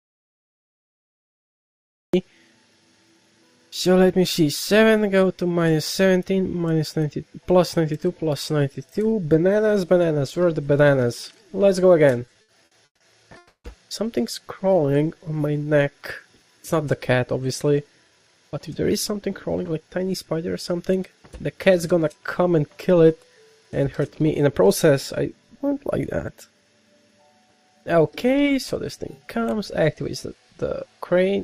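From the very start until 2.14 s, the input was most likely lost, through a disconnected source, a failed link or a mute, while the recorder kept writing silence. This is an audio dropout to silence. The clip opens in silence with no room tone at all, and the sound only cuts in at 2.14 s, already in mid-flow. Whatever was present during those first two seconds is gone.

Between 12.20 s and 13.01 s, packets kept arriving late, so the jitter buffer ran dry six times in quick succession. These are repeated stalls, a stutter. Each time, the receiver held and continued the last sound until data resumed, filling about 330 ms in all, with the longest wait 150 ms. Concealment makes up about 41% of that stretch. Nothing is lost, but the audio drags and hiccups along in short jerks.

At 13.37 s, packets were likely held up in transit and the buffer emptied again, producing a call audio freeze that lasts until 13.65 s. 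The receiver extended the last sound as a buzzy continuation that fades, and the final 100 ms of the 270 ms fill is silent. When packets return, the sound picks up exactly where it stopped. A gap has been inserted, and everything after it now runs 270 ms later.

From 14.74 s to 16.24 s, the buffer was running low, so the receiver rebuilt its reserve with a jitter buffer slow-down. It repeated single pitch periods and fragments of pauses many times over, adding 179 ms. Playback runs at 89% speed with the pitch unchanged. Sounds are drawn out and sluggish.

The opposite adjustment happens three times as jitter buffer speed-up. The buffer held more than its target, so the receiver trimmed short slices of one or a few pitch periods in rapid succession. The first instance runs from 18.11 s to 19.98 s at 109% speed, removing roughly a fifth of a second. The second runs from 23.80 s to 24.92 s at 107%, removing about a tenth of a second. 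The third runs from 29.95 s to 30.65 s at 108%, removing a small fraction of a second. Pitch stays the same, but the audio sounds hurried and slightly clipped in pace.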